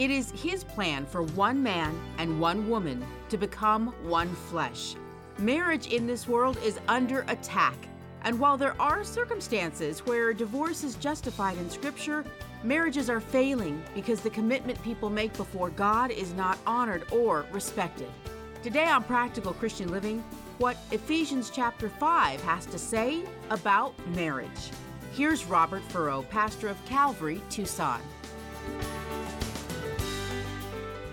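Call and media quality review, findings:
No faults found in the signal path: no dropouts, clipping, timing discontinuities or level anomalies detected anywhere in the capture.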